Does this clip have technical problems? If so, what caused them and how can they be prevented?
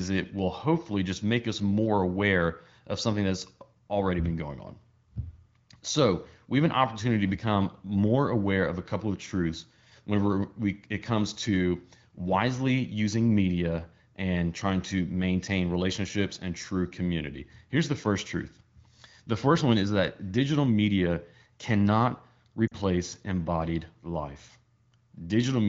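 Yes: lost AMR speech frames from 22.67 to 22.74 s, between "that digital media cannot" and "embodied life". The 40 ms gap fits two corrupted 20 ms frames. The decoder carried the last pitch and vocal tract settings forward at falling gain, giving a quick drop to near silence. Better radio coverage or stronger channel coding would prevent it.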